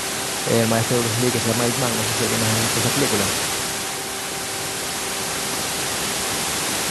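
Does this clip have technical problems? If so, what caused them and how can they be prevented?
No, nothing stood out as a technical problem on listening to this speech clip, so there is nothing here to prevent.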